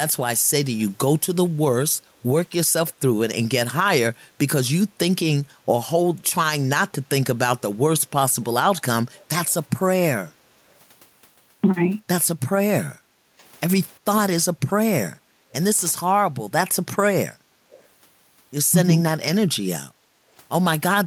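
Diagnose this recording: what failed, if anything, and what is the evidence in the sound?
Call processing, echo leak: at 0.73 to 0.83 s and 17.71 to 17.87 s a faint copy of the speech returns 357 ms late, roughly 30 to 35 dB down, likely far-end echo the canceller failed to subtract. A spectrogram shows weak, smeared harmonic traces trailing the original.

Call processing, background gated by the echo canceller: the room tone drops about 13 to 16 dB at 9.11, 10.56, 12.91, 15.11, 17.51 and 20.13 s, each dip lasting roughly a tenth to half a second. The canceller clamped the microphone during loudspeaker playback. Waveform and spectrogram show abrupt, flat-floored notches in the noise floor.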